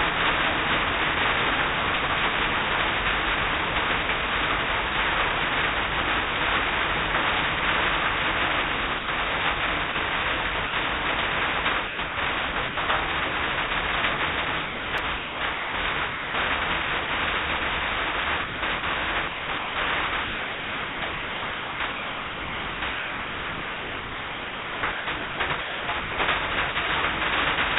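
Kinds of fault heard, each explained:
Sound dropped by the voice detector: The sender's voice activity detector likely mistook quiet parts of the sound for background and stopped sending, so comfort noise stands in for the missing audio. This happens at 8.99 s for 90 ms, at 9.92 s for 30 ms, at 10.67 s for 60 ms, and at 17.06 s and 26.72 s for 30 ms each. In the waveform, each shows as a sudden step down to a low, even hiss. On a spectrogram, detail gives way to a smooth, featureless noise band, still capped at 4 kHz like the rest of the G.711 audio.
Sound chopped by the voice detector: Here the detector likely toggled on and off repeatedly, cutting pieces out of the sound and filling them with comfort noise. It happens from 11.87 to 12.77 s (330 ms replaced), from 14.66 to 16.34 s (960 ms replaced), and most heavily from 18.44 to 26.18 s, where about 5.7 s is substituted. The result is choppy. 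The waveform alternates between bursts of real signal and flat low-level stretches, and the spectrogram shows a patchwork of textured and uniform noise columns.
Repeated buffer: At 14.98 s, fresh audio did not arrive in time, so the playback device replayed the previous block once. The repeated piece is tiny, which fits a 5 ms buffer, so it sounds less like a stutter than a single small click inside the chopped stretch. In the waveform, a 5 ms slice appears twice in a row with an abrupt discontinuity at the join. On a spectrogram, that join shows as a thin vertical broadband streak.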